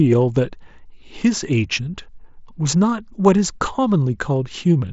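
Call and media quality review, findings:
Nothing stood out on listening to this speech over the Bluetooth mSBC headset path, whose wideband sound stops around 7.7 kHz as that codec does.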